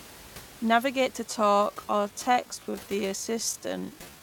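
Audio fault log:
1.23–4.23 s, time-stretched section: from here to the end the speech slows to about 0.625 of its pace while the pitch holds, so it drags. Likely software stretched it by repeating short slices, with the room noise stretched along.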